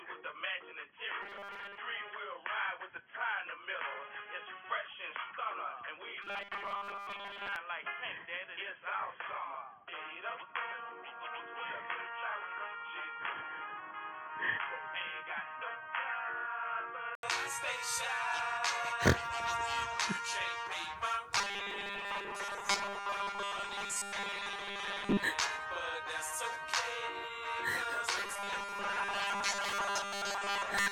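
From the start until 17.23 s, the sound is dull and boxy. It sits about 5 dB lower, over faint added background noise. It clears after a brief 80 ms gap, likely an input switched to a poorer device. Robotic sound from repeated short buffers appears at 1.22–1.77 s, 6.22–7.56 s, 21.37–25.24 s, and 28.17 s to the end. A rigid metallic buzz at 200 Hz comes in. That pitch fits a 5 ms slice being repeated, likely while most of the real audio is skipped.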